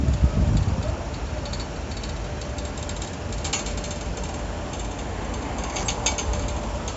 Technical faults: none

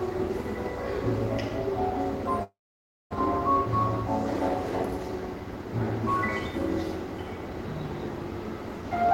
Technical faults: call audio freeze; jitter buffer speed-up

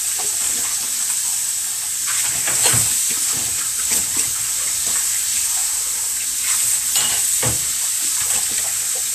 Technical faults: Vorbis compression

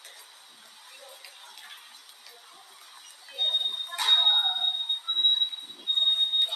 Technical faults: noise suppressor applied to music or sounds; sound cut by the noise suppressor

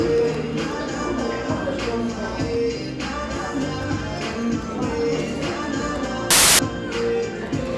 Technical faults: file tags played as audio

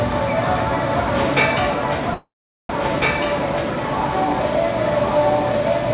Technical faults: doubled audio track; call audio freeze

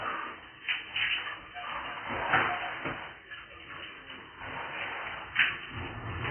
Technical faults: AAC compression

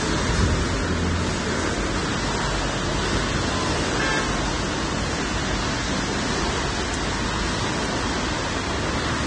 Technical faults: Vorbis compression

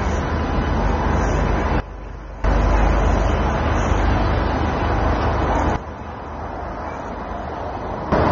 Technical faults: AAC compression; sudden gain jump

